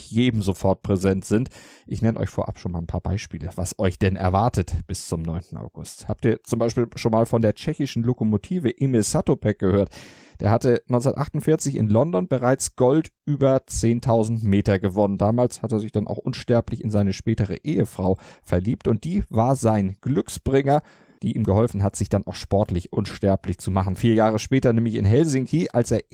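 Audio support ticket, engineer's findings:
No faults found on listening. Opus voice path in hybrid mode at 24 kbps holds full bandwidth, with only the light coding texture that setting brings to the speech.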